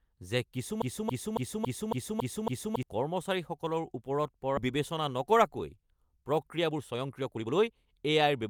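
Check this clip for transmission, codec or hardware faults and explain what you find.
Three faults are present. From 0.82 to 2.83 s, a broken-record loop repeats one 0.28 s fragment seven times back to back, likely from a stalled stream resending its last buffer. Unlike a stutter, the repeats are identical. At 4.57 s a skip ahead drops about a second of speech and butts both sides together with no gap, unlike a dropout, which leaves silence. From 5.13 to 8.44 s a jitter buffer speed-up trims tiny pitch-period slices to shed roughly 0.4 s of backlog. Speech runs about 13% faster at unchanged pitch, unlike simple resampling, which would raise the pitch.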